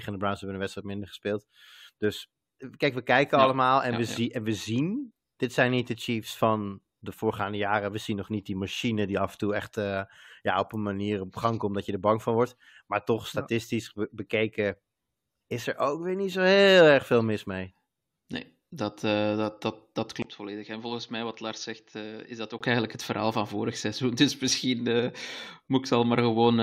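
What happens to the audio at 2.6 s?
At 2.59 s the speech jumps ahead with a small blip, a stream segment skipped. One segment likely failed to load and the player carried on with the next, dropping part of the programme. The waveform shows an abrupt discontinuity, and the spectrogram a thin vertical broadband line.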